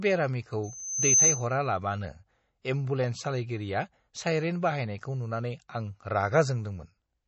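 From start to finish the speech sounds watery and swirly, with smeared consonant attacks and nothing above 7.9 kHz. This is likely MP3 compression at a low bitrate, plausibly around 32 kbps. A spectrogram shows a hard ceiling and flickering, patchy upper bands.

From 0.63 to 1.47 s a loudspeaker feedback squeal appears: a 6.2 kHz tone swells over roughly half a second to about 10 dB above the speech as the mic–speaker loop runs away. On a spectrogram it is a bright horizontal line.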